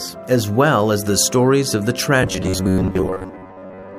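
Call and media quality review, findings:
Robotic sound from repeated short buffers, 2.23 s to end of clip. Likely cause: new audio reaching the playout stage too seldom, so the last short block is replayed to fill the gaps, with most of the material in this stretch being repeats rather than fresh audio. Result: rigid metallic buzz fixed at 93.8 Hz, which fits a block of about 10.7 ms, with the original sound's contour only roughly preserved underneath.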